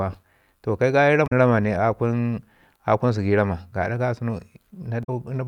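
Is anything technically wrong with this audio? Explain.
Yes. Twice in this speech clip, from 1.24 to 1.33 s and again from 5.01 to 5.09 s, damaged data in the compressed stream breaks the sound with a short glitch of about 90 ms. The bytes for those frames are corrupted, so the decoder misreads or rejects them, loses frame sync and skips forward to the next valid header.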